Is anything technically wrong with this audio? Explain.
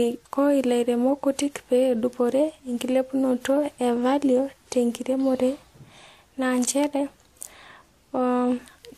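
Yes. The whole clip shows signs of transcoding between lossy codecs. Nothing comes through above 16.3 kHz, and the speech carries the artefacts of two codecs at once, heard together. That mix points to a chain, likely a WMA encode at around 96 kbit/s followed by AAC-LC at around 64 kbit/s. The second encoder spends its bits reproducing the first one's damage and adds its own, while the lowest bandwidth limit in the chain stays.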